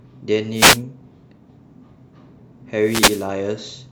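A short swish of static rises over the speech from 0.53 to 0.82 s, and a longer burst returns from 2.81 to 3.29 s. Both are wireless microphone noise hits. The radio link of an analogue FM microphone faded as reflected signals cancelled at the receiver, so its own hiss climbed toward the level of the wanted signal and broke through as a rush of noise.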